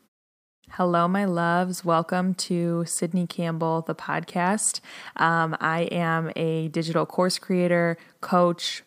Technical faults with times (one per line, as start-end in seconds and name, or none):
none